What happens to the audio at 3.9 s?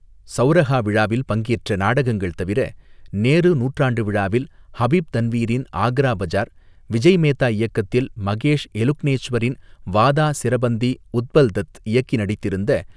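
Nothing goes wrong at 3.9 s; the speech carries on intact through that moment, with no dropout, click, glitch or other fault to be heard.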